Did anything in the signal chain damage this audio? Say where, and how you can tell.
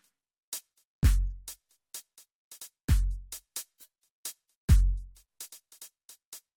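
No, nothing in the signal chain has audibly damaged this music; the signal holds steady throughout, with no stage leaving a mark on it.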